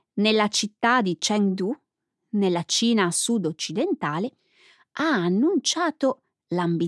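No technical faults can be heard in this speech recording, so there is nothing to describe in time order.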